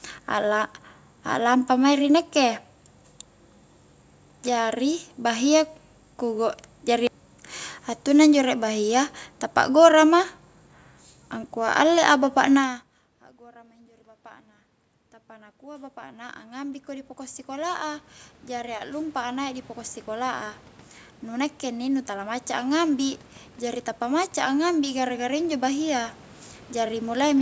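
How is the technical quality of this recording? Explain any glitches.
The recording has one glitch, in its second half.

From 13.52 s to 27.29 s, the voice and the room noise behind it swell together, steadily getting louder over many seconds. This is automatic gain rising. Just before, around 12.5 s, the talker moves away and the level reaching the microphone drops by about 24 dB. The call's gain control reads that as too quiet an input and gradually raises its gain by about 21 dB, lifting the background as much as the voice.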